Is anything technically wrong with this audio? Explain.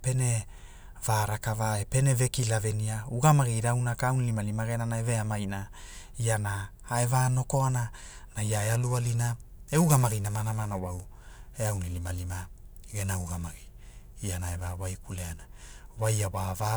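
Yes. From 8.52 s to the end, periodic clock jitter is present. Interference wobbles the converter's sampling clock at about 1.5 kHz. This places sidebands that far above and below every speech component, strongest on higher frequencies. It gives a rough, metallic edge that disappears in pauses.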